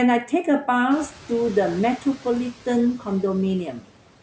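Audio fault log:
0.90–1.08 s: noise suppressor catching up. The room noise rises sharply near 1.0 s, by about 17 dB. The suppressor's noise estimate is still set for the quieter background. So the new noise passes with little reduction at first. Over the next 180 ms the estimate adapts, and the noise sinks by about 5 dB. You hear a brief swell of noise that then settles down.
1.98–2.26 s and 3.72–3.90 s: speech cut by the noise suppressor. After the noise rise, the background sits only about 20 dB below the speech. The suppressor treats some quiet speech as noise and turns it down with the background. The drop is about 11 dB in the first stretch and about 13 dB in the second. Around 100 ms and 150 ms of sound are affected. Those parts sound swallowed and faint.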